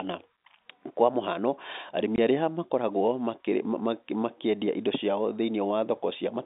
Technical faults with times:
2.16-2.18 packet loss filled with silence

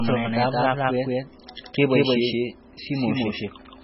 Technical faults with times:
0.00-3.83 doubled audio track
0.00-3.83 low-bitrate audio saved at a high bitrate

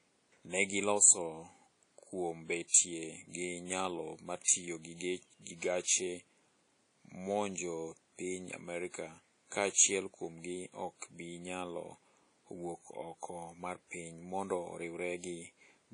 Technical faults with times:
0.00-15.93 WMA compression

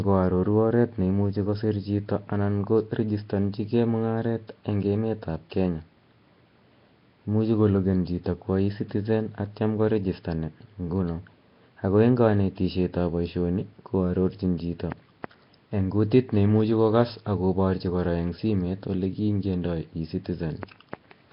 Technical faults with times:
0.00-21.32 Nellymoser compression

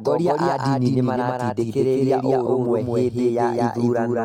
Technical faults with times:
0.00-4.25 doubled audio track

